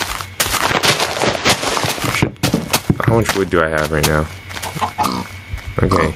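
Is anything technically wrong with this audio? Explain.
Yes. Gain pumping runs through the whole clip. The level swings by around 20 dB, rising in the gaps and dropping on each loud sound. The likely cause is input gain set far too high, with a fast limiter or compressor pulling it back down. Loud and soft passages end up squashed together.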